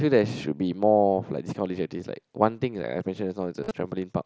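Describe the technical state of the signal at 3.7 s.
At 3.7 s there is concealed Bluetooth headset packet loss from 3.63 to 3.71 s. Lost packets were patched by repeating recent waveform, giving brief buzzy patches with a small warble where real audio returns.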